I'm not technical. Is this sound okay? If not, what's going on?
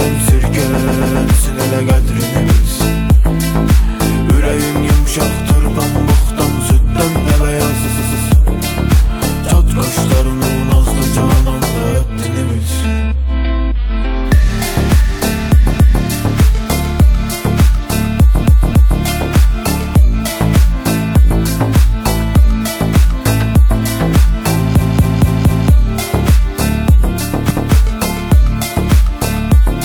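No. The sound has two kinds of fault.

The main one is repeated frames. In six places a short chunk of already-compressed audio plays again, so the sound stutters and skips back on itself. This happens at 0.77, 7.83, 15.72, 18.42, 24.78 and 27.47 seconds. Each repeated chunk lasts between about 0.14 and 0.28 seconds. It plays again once at some points and up to four times at others. Each repeat adds its own length to the clip, so the longest case, at 24.78 seconds, stretches the audio by almost a second.

The second fault is a block of digital silence at 2.46 seconds. The sound drops out for well under a millisecond and then comes straight back with no fade. A gap that short is not heard as a pause. You hear a tick or a brief dip instead.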